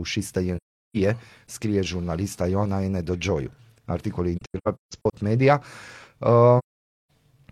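Soft-edged holes open in the speech at 0.57 to 0.97 s, as a broken scatter of dropouts from 4.36 to 5.15 s (longest roughly 150 ms), and at 6.58 to 7.10 s. This is AAC frame loss with muting: missing frames were decoded as silence, and overlapping windows faded the sound out and back in.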